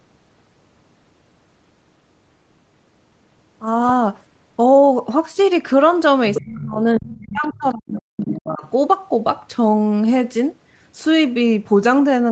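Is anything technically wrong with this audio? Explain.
Yes, there are two related problems in the middle of this speech clip, both around 6 to 9 seconds.

Other side's voice leaking through: a second, fainter voice shows up from 6.34 to 6.6 s, again from 7.06 to 7.48 s, and in a tiny scrap at 7.70 to 7.74 s. It's about 10 dB under the main speech at first, then drops to roughly 20 and 30 dB down. The likely cause is the far end playing on a loudspeaker and the echo canceller not fully scrubbing it from the mic, so bits of it slip through.

Speech suppressed in double talk: the main talker dips hard from 6.45 to 6.77 s and again from 6.99 to 8.64 s, at its deepest around 30 dB down. It sounds like the voice is being ducked or chopped. This likely happened because both sides were talking at once, and the canceller couldn't separate its own talker from the echo, so it turned everything down together. 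That's likely why these dips overlap the leaked voice.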